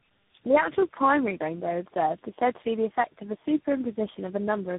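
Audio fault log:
throughout: tandem speech coding, audio band-limited below 3.8 kHz, with layered roughness and warble beyond any single codec's artefacts, pointing to about four speech coders in succession, each re-encoding the last one's damage.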